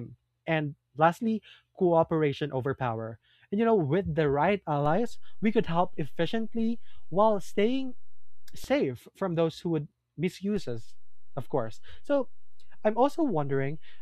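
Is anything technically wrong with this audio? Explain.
Yes. There are two DC steps. At 4.86 s, after "know with the right", the zero line jumps by about -31 dBFS. It steps back at 8.64 s, before "from those who would". At 10.57 s it jumps by about -33 dBFS and holds to the end. Each shift gives a low thump while the speech continues unchanged.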